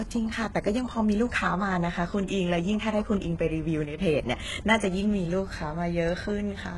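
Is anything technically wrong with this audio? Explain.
Yes, there are two faults. Throughout the speech, the treble has a gritty, metallic edge and s sounds come across lispy, with nothing above about 11.5 kHz. This is heavy damage from what is likely HE-AAC compression, at a very low bitrate, around 12 kbps. Only the lower spectrum is truly coded. The upper bands are copies shifted up from below, so their harmonics fail to match the real ones.

From 3.84 to 3.99 s, the level falls abruptly by about 6 dB and then recovers. The likely cause is one channel dropping out. With only one stereo side feeding the mono sum, the shared content loses half its amplitude.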